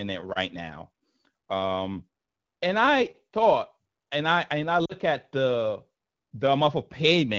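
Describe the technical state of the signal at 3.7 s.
At 3.7 s, as throughout, sample clock jitter of around ten microseconds makes samples land slightly early or late. The error tracks waveform slope, so loud, bright speech gains a rough hiss roughly 25 dB below the signal, which fades in pauses.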